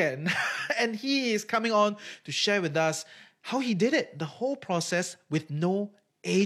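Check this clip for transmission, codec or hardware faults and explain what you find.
Nothing in this speech recording points to a fault. No event stands out anywhere in the audio that would call for an explanation.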